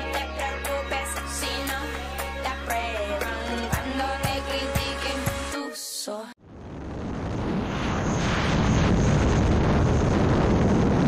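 Nothing goes wrong anywhere in this one, so there's no fault to point to at any moment in the audio.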